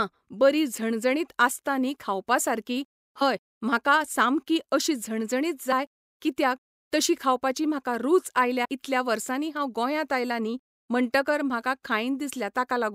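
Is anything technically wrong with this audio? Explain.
Yes. At 3.20 s, 5.71 s and 8.64–8.66 s the speech briefly smears and lurches forward. These are compressed frames skipped, with about 30 ms lost at the first two points and roughly 70 ms at the third, which fits one and three dropped 26.1 ms frames.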